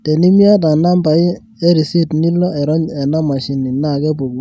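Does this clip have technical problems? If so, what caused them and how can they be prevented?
No, there are no technical problems to report here.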